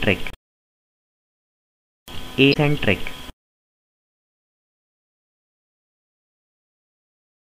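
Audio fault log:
0.30–0.35 s and 2.50–2.56 s, damaged data in a compressed stream: two short glitches, roughly 50 and 70 ms long, where bad bytes in the compressed data throw the decoder off. It misreads those frames and loses sync until it finds the next clean frame header.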